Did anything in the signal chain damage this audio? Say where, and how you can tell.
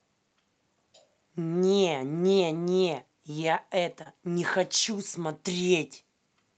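Yes. At 4.03 to 4.07 s a short concealed packet loss occurred in the network and jitter-buffer stage of the call path. About 20 ms of audio never reached the decoder in time, and the receiver covered the gap by extending the preceding sound for roughly 18 ms before crossfading back to real audio. This is audible as a brief smear or wobble in the speech at that point, inside audio band-limited to about 8 kHz by the call codec.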